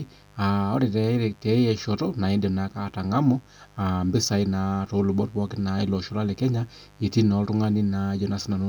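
A steady, raspy mains buzz runs under this speech clip from start to finish. It sits well below the speech, roughly 30 dB down. It is built on 50 Hz. Sharp spikes from a dimmer, rectifier or unshielded cable arrive twice per cycle, spreading harmonics into the kilohertz range.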